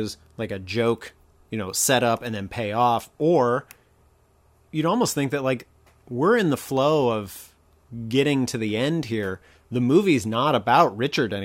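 Nothing goes wrong anywhere in this stretch of speech, so there's no technical fault to point to.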